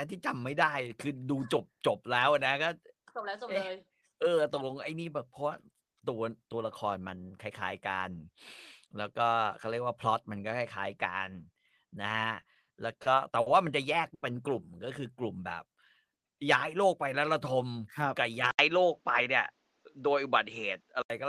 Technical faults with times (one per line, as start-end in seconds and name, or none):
12.41-13.48 repeated stalls (stutter)
14.14-14.24 short stall from a late packet
16.76-17.54 jitter buffer speed-up
18.51-21.10 input switched to a poorer device